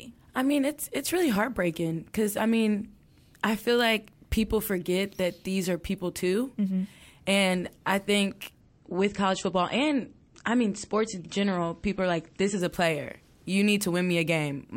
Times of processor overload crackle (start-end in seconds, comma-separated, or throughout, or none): none